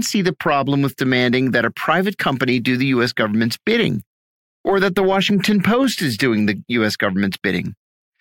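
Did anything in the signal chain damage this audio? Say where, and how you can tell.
Yes. At 5.84 s, just before "is doing the", there is a single sharp click, seen as a thin vertical line running across the whole spectrum. This is dropped samples. A fraction of a millisecond of the stream is missing, so the waveform jumps straight from one value to a later one. The likely cause is a driver or buffer stage losing a few samples in transfer. Unlike a dropout, no sound goes missing and there is no audible gap, only the discontinuity's click.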